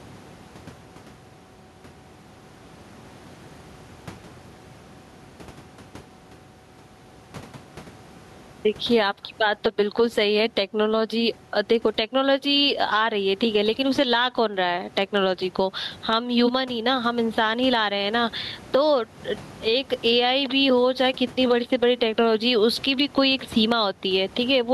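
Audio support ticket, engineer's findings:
Gain pumping throughout: room noise swells between phrases, ducks under each loud syllable, about 15 dB swing, squashed dynamics. Likely mic gain set far too high, fast limiter clamping. Room noise itself sits about 34 dB below speech.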